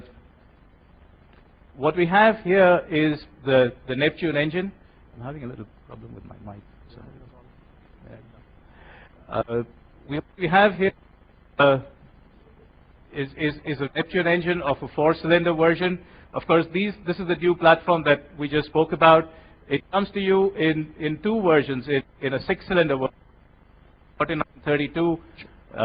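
Nothing in the recording stood out as a technical fault on listening.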